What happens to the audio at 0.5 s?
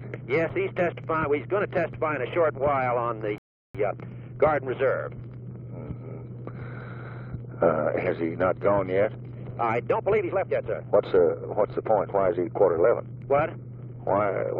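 At 0.49 s a block of digital silence lasting about 2.9 ms, which fits a 128-sample buffer not filled in time, drops the waveform abruptly to silence, heard as a sharp tick and visible as a thin vertical broadband line.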